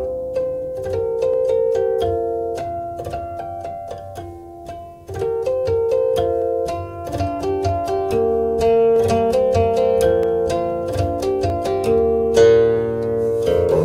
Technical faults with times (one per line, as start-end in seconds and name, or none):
1.34-12.77 clock drift buffer slips